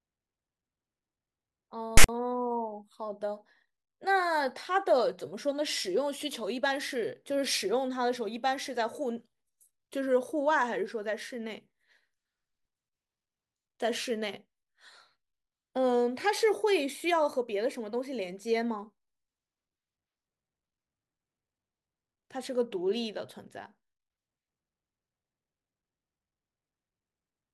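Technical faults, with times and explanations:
1.97–2.09 s, file tags played as audio: text tags and their zero padding were read as samples, giving a hard-edged, one-sided rasp, then silence.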